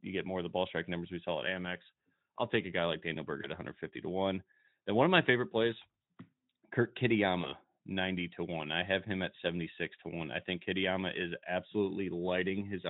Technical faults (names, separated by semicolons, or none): VoIP packet loss concealed by the speech codec